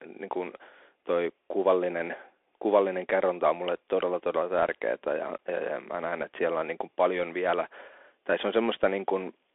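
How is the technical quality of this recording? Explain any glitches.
The recording is narrowband and rough throughout. The speech sounds thin and boxed-in, s sounds come out scratchy, and granular hiss sits under everything. That's the Bluetooth CVSD headset codec. It tracks the waveform one up-or-down bit at a time with an adapting step. Here it passes only about 300 Hz to 3.4 kHz, with nothing above 3.8 kHz, consistent with a 64 kbps link.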